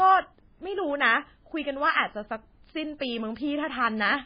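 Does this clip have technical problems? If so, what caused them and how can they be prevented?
Yes, the whole thing has heavy damage, likely from MP3 compression at a very low bitrate, around 16 kbps: nothing above 5 kHz, with watery, swirly speech. To prevent it, encode at a much higher bitrate or keep a lossless copy.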